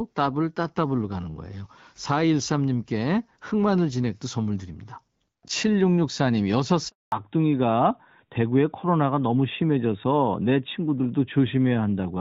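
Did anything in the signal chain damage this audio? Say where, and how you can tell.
Yes. At the network stage, a handover gap left no speech frames arriving for 240 ms, from 6.88 to 7.12 s. The sound dies away into silence and that stretch is lost.

At the codec stage, a fallback to narrowband follows at 7.12 s. Everything above 4 kHz disappears to the end, which points to a drop from AMR-WB HD Voice to AMR-NB, so the sound turns duller and rougher.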